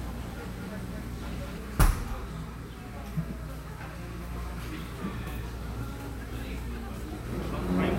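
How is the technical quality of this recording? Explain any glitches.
There's one glitch, right at the top. From the start until 1.58 s you get a doubled audio track: a second full-band copy trailing roughly a fifth of a second behind, a few dB quieter, with no room tail, cutting off abruptly. Likely a slower second capture path mixed in.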